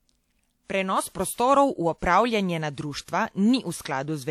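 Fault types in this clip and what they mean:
pre-echo: a transform codec spreads quantisation noise across a whole block, so a short hiss runs ahead of three sharp speech onsets, at 1.34, 1.98 and 3.82 s, lasting 34 to 44 ms; unlike reverb or echo, the smear comes before the attack, not after.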